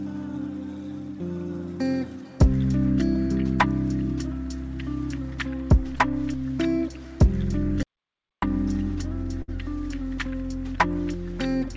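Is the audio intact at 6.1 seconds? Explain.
Yes, the audio is intact at 6.1 seconds, with nothing breaking into the sound at that moment as it passes through the call path, whose codec leaves no content above 8 kHz.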